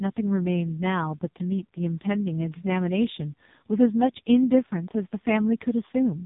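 From start to end, the speech carries the sound of the AMR narrowband mobile codec. Nothing above 3.8 kHz comes through, so it sounds thin and boxed in, like an old phone call. The codec rebuilds the voice from a vocal-tract model fed by a few pulses per short frame. Here the damage is heavy. The voice is buzzy and synthetic, which points to the lowest AMR-NB mode, around 4.75 kbps.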